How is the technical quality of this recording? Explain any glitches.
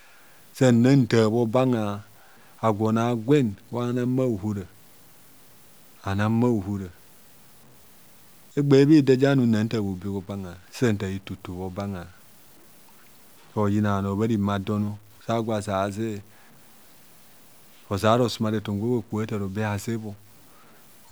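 The speech carries a coarse, grainy distortion from start to finish. It points to low bit depth without dither, likely truncation to about 8 bits. The rounding error tracks the signal, sitting roughly 35 dB below it, so quiet syllables turn gritty and fade-outs sputter. Unlike steady dither hiss, it vanishes in silence and changes with the sound.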